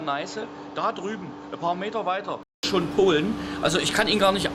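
Input switched to a poorer device, from the start to about 2.63 s: for this opening stretch the sound is dull and band-limited, with nothing above 7.6 kHz, noticeably quieter (roughly 10 dB down) and carrying a faint background noise of its own, roughly 45 dB below the signal. A short gap of about 200 ms marks the switch, after which the full bandwidth and level return. The likely cause is the input briefly running on a narrower, lower-grade microphone path before changing back to the proper device.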